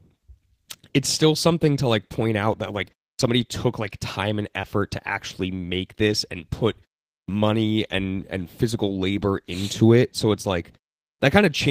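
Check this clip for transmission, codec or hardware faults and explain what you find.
Two faults are present: clipped starts after pauses, heard three times, and one short concealed packet loss.

Clipped start after a pause, at 3.15 s (after "point out that like", before "took like time and"), 7.24 s (after "make this and put") and 11.16 s: each time about 42 ms of speech onset is missing, so the sound snaps in abruptly. These follow pauses of 0.3 to 0.47 s, during which the output path went idle and needed time to wake and lock again.

Short concealed packet loss, 4.61 to 4.65 s, between "took like time and" and "to actually make this": there is a brief smear or wobble. About 20 ms of audio never arrived, and the receiver covered the gap by extending the preceding sound, then blended back into the real signal.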